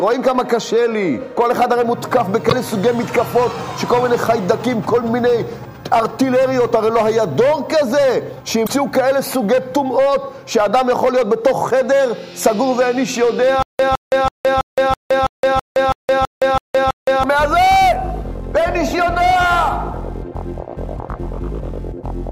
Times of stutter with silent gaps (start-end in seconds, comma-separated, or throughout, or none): 13.63-17.23